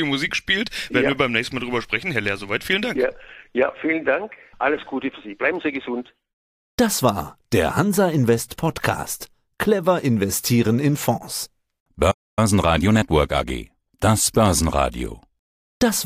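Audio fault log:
12.11–12.39 s, playback stall: the speech cuts off mid-flow into about 0.26 s of dead silence, likely because the player ran dry of buffered data or its thread was blocked. The waveform shows a flat gap and the spectrogram a blank vertical band.
12.39–14.13 s, time-compressed catch-up: after the stall the speech runs about 1.15 times fast at unchanged pitch, hurried as small pieces are cut out and cross-faded. The waveform looks denser, and the harmonic bands stay level while syllables crowd closer.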